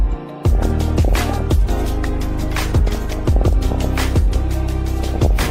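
From 0.53 to 1.42 s, again from 2.87 to 3.86 s, and briefly from 5.03 to 5.31 s there's classic DAB burbling: short blips of noise in single sub-bands over the sound. Weak reception lets bit errors slip past error correction into the MP2 data, so corrupted samples put short blips of noise in single sub-bands and corrupted scale factors make sub-bands jump in level for up to a frame. The error rate sounds under a percent in the first two bursts and around one percent in the last.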